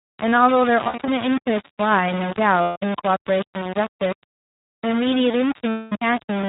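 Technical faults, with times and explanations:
throughout: low bit depth without dither. The speech is coated in a coarse, grainy grit that follows the level, with the error only around 10 dB under the signal. Quiet tails sputter between steps, most likely from rounding to something like 4 bits with no dither.
throughout: iLBC codec. Nothing gets through above 4 kHz, so it's firmly narrowband, and the voice has that slightly rough, synthetic edge from excitation coding. The 20 ms framing fits iLBC's 15.2 kbps mode, and the codec damage is plainly audible.
0.84–1.10 s, 2.62–2.77 s, 5.71–5.93 s: lost iLBC frames. The decoder fills each gap by repeating the last pitch cycle with noise, so you hear a held, buzzy vowel: 160 ms scattered over 240 ms, then 140 ms, then 220 ms. It recovers almost immediately after each gap.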